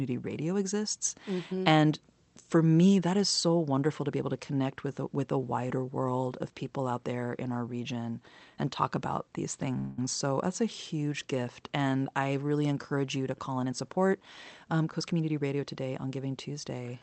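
At 9.78 s, right after "and talk about these", the speech stalls for about 0.2 s, until 9.99 s. The last sound is drawn out as a fading buzz or hiss rather than cut to silence. This is a call audio freeze, most likely caused by packets arriving late and the jitter buffer running dry. Unlike concealment of lost packets, nothing is skipped. The speech resumes exactly where it stopped, so everything afterwards simply arrives about 194 ms later.

From 13.63 s to 15.30 s, following "encourage you to call", the speech runs at about 111% of normal speed while the pitch stays put. This is a jitter buffer speed-up. The receiver had built up too much delay, plausibly from the earlier stall, and trimmed it by repeatedly cutting short slices of one or a few pitch periods, about a fifth of a second in total. The result sounds hurried. Because the pitch is unchanged, it differs from a plain resampling speed-up, which would raise the pitch. 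The whole clip also carries the band limit of the Opus call path, with nothing above 8 kHz.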